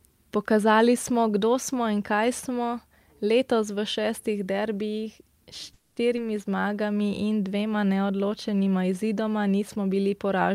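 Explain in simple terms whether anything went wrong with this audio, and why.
Things go wrong three times, all within about a second of each other.

At 5.73 to 5.98 s there is a call audio freeze. The last sound hangs on as a fading buzz or hiss for about a quarter of a second. The likely cause is delayed packets leaving the playback buffer empty. When the speech resumes, it picks up exactly where it stopped. Nothing is lost.

At 6.16 to 6.19 s there is a skip ahead. A short piece of speech, under a tenth of a second, is dropped. Playback jumps forward, and the two sides are joined almost directly, with no real pause.

From 6.50 to 6.87 s there is a jitter buffer slow-down, just before "in dvema neodločenima izidoma". The system repeats tiny slices of sound to rebuild its reserve. This adds 55 ms, so the speech plays at about 87% speed. The pitch stays the same, but the sounds are slightly drawn out.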